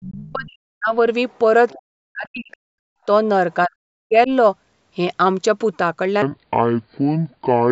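It's a short speech recording with three distinct problems. First, speech suppressed in double talk: from the start to 0.94 s, again from 1.73 to 2.52 s, and from 3.66 to 4.3 s, the talker's level collapses, dropping by something like 40 dB at its deepest. The likely cause is the echo canceller hearing both ends at once, failing to tell the talker from the loudspeaker echo, and ducking everything. Second, there's the other side's voice leaking through in brief scraps at 1.29 to 1.38 s, 1.69 to 1.74 s and 2.51 to 2.57 s. They're faint, roughly 30 to 35 dB under the talker. That's most likely residual loudspeaker echo the canceller didn't fully strip out of the mic signal, and the fact that they cluster around the suppressed stretches fits the same struggling canceller. Third, from 6.22 s to the end there's a section at the wrong speed. It's running at 0.631 times normal, so everything drags and drops around seven semitones, going deep and sluggish. 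That points to a likely clock mismatch in whatever editor or player handled that tail, with speed and pitch shifting together. The call's mic processing itself is working normally, taking out only the lowest bass.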